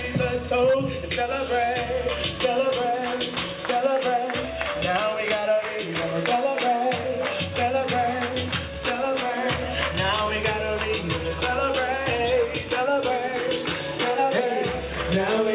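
No technical faults can be heard anywhere in the audio.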